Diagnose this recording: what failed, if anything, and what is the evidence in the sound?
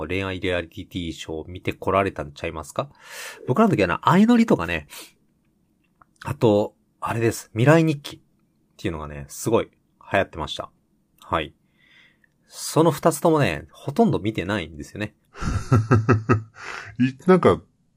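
From 15.27 s, a section at the wrong speed: 0.764x, roughly five semitones lower, spectrogram harmonics shifted down and stretched, likely playback clock mismatch.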